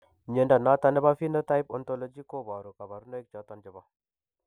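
From 1.35 s to 2.62 s the speech carries zipper noise: the level drops by roughly 15 dB, but the gain moves in coarse unsmoothed steps, around 40 a second, rather than as a continuous ramp. Each jump leaves a small click, so a fast ticking rides on the speech while it fades. On a waveform the envelope descends as a staircase; a spectrogram shows evenly spaced thin vertical broadband lines across the span.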